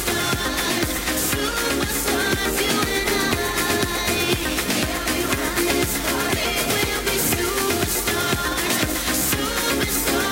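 Periodic clock jitter runs through the whole sound. Interference is wobbling the converter's clock at around 2 kHz. Every component gains sidebands spaced about that far above and below it. Higher content suffers most. The result is a rough, metallic edge that disappears in silence.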